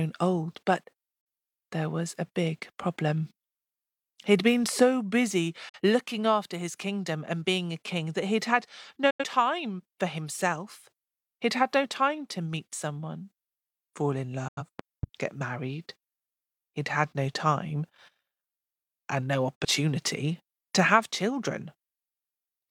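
Digital broadcast dropouts at 1.21, 5.69, 9.10 and 14.48 s: the speech fades out within about 8 ms and leaves a short hole. The hole is about 43 ms at the first two and about 85 ms at the latter two, which fits the receiver muting for one or two failed frames before good frames returned.

Loud pop at 14.79 to 15.06 s: two sharp pops stand roughly 10 dB above the speech, which continues underneath. They likely come from a voltage step from a plug or switch, shaped in the following circuitry.

Digital broadcast dropout at 19.56 s: another muted gap of about 43 ms, faded in about 8 ms. The speech sent during it is lost.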